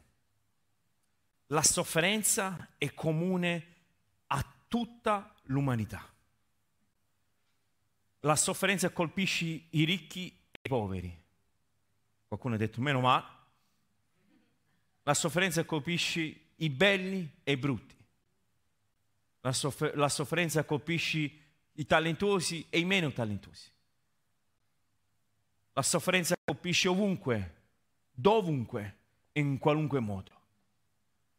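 At 1.59 s, in a brief burst of about 90 ms ending at 1.68 s, a loud pop strikes twice in quick succession, standing roughly 10 dB above the speech, which continues underneath. The likely cause is a sudden voltage step or pulse, such as from a plug, switch or static discharge, shaped by the downstream circuitry. On a waveform it shows as two tall spikes towering over the speech envelope; a spectrogram shows two thin vertical stripes spanning the whole frequency range.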